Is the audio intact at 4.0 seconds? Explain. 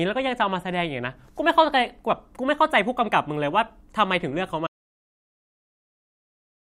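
Yes, at 4.0 seconds the speech plays through cleanly, with no dropout, click, distortion or other audible fault at that point.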